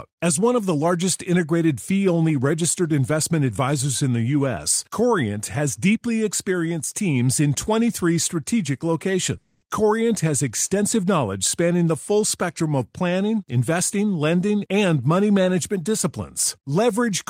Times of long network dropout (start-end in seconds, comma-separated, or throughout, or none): 9.37-9.64